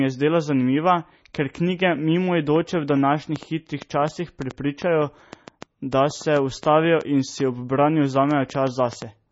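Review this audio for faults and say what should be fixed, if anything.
The speech throughout has the watery, swirling texture and smeared attacks of heavy MP3 compression, with nothing above 7.7 kHz, which fits a very low bitrate such as 24 kbps. The likely cause is that the encoder, short of bits, zeroed weak frequency lines that flicker between frames and cut the treble. On a spectrogram this shows as a hard ceiling at 7.7 kHz and patchy, blocky holes below it. Prevent it by encoding at a higher bitrate or with a lossless format.

From 2.56 s to 9.03 s a train of clicks ticks over the speech and its pauses, around 30 pulses at about 4.95 per second with irregular spacing, standing roughly 10 dB above the speech. The likely source is interference or a faulty connection or power supply. A waveform shows repeated similar narrow spikes, and a spectrogram shows thin vertical lines spanning the band. 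Prevent it by securing cables and connectors and moving the recording chain away from interfering equipment.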